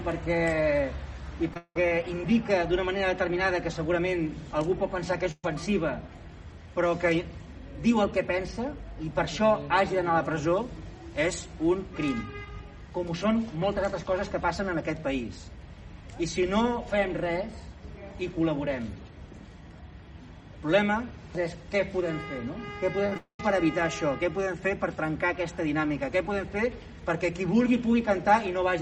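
At 1.48 s and again at 1.54 s there are two short concealed packet losses, lasting about 22 ms and 26 ms. Each is a momentary smear in the sound where the decoder lacked fresh data and extended the previous waveform before blending back into the real signal. Roughly 10 ms and 20 ms of material are skipped.

From 1.57 to 1.76 s the sound turns into a held, fading continuation of the last sound, and the final 70 ms fall to silence. It resumes with about 180 ms missing. The likely cause is a long network dropout, where nothing arrived for that stretch and the receiver kept extrapolating until it gave up.

At 5.31 to 5.44 s a burst of packet loss removes about 120 ms. The concealment stretches the preceding sound and attenuates it as the gap grows, leaving a dying buzz or hiss with a 30 ms silent tail before playback resumes further along.

Around 23.06 s a cluster of short concealed packet losses, at 23.06, 23.09 and 23.14 s, produces rapid wobbles totalling about 50 ms of lost audio. 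It leads straight into what is likely a second long network dropout from 23.17 to 23.40 s. Here about 220 ms never play: a fading extension of the last sound gives way to about 100 ms of silence before the audio returns.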